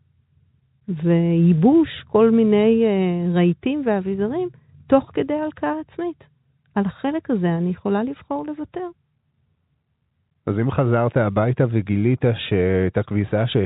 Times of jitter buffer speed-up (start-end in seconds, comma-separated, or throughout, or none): none